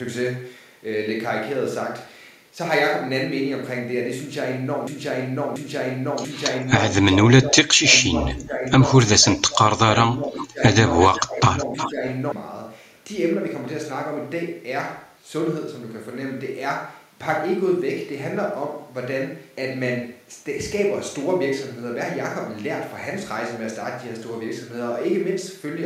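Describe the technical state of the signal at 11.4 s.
At 11.4 s the signal sits inside a broken-record loop that runs from 4.87 s to 12.32 s. A 0.69 s fragment repeats exactly, back to back, 11 times. The cause is likely a stall in the player, encoder or stream, which kept resending the last fragment it held. Whatever should have played during those seven and a half seconds is gone, replaced by the identical recycled piece.

Overlapping it, from 11.1 s to 12.03 s, is speech suppressed in double talk. The level dips by around 15 dB at its deepest, and about 0.7 s in total is affected, heard as the speech sinking in level. This is likely an echo canceller that could not separate the near talker from loudspeaker echo while both sides spoke, so it attenuated everything.

Starting at 11.44 s and lasting until 11.9 s, an echo leak adds a copy of the speech delayed by 362 ms, sitting roughly 10 dB below it. 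It is likely residue that a loudspeaker-side echo canceller failed to remove and sent back down the line.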